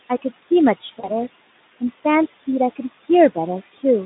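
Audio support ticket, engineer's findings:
Noise suppressor artifacts, full clip. Background drops about 16 dB between phrases and pumps back up under speech. Probable component: noise suppression stage. Per-frame band gains treat the room noise (about 15 dB below speech) as steady noise and cut it, but the gains track speech onsets, so the noise floor breathes with the talker.

VoIP packet loss concealed by the speech codec, 0.99–1.14 s. Speech smears briefly, then sounds weak and distorted until about 1.14 s. Probable component: Speex decoder concealment, with the narrowband line at a setting near 15 kbps. The gap points to roughly 40 ms missing, about two 20 ms frames. The decoder repeats the last pitch and filter with falling gain, and because each frame builds on the previous one, recovery lags after packets resume.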